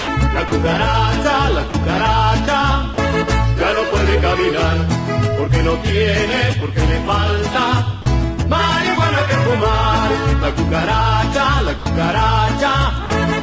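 Brief gaps of flat, steady noise at 0.00–0.08 s, 0.48–0.52 s, 1.70–1.74 s, 2.94–2.98 s, 8.02–8.06 s, 11.78–11.86 s and 13.06–13.10 s are likely sound dropped by the voice detector. The sender judged the audio to be background and stopped transmitting, and the receiver substituted comfort noise. On a waveform each gap shows as a sudden low, even band. On a spectrogram it appears as a short featureless smear before the sound resumes. The call path leaves nothing above 8 kHz, which fits the G.722 codec.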